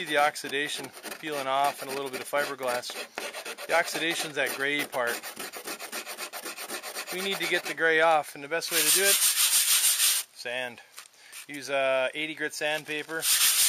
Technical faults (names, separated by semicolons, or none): none